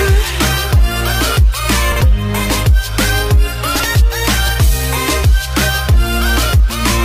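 Chunks out of order at 1.92 to 2.01 s and again at 3.76 to 3.84 s: in each spot, two neighbouring blocks of about 43 ms play swapped, the late one arriving a single chunk behind where it belongs. No audio is missing, but the sound jumps backward and forward, leaving a brief jumbled stutter with three hard joins.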